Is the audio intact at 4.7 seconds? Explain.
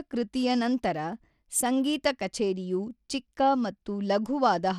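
No. At 4.7 seconds the speech carries the same damage it has from start to finish: the top end thins out and flickers, and a gritty, aliased haze sits on the sound. That's the signature of Bluetooth SBC compression, likely at a tight setting; the plainly audible damage fits something around 96 kbps. SBC splits the signal into a few wide bands with crude bit sharing, so the weak high bands get starved and everything else is coarsely quantised.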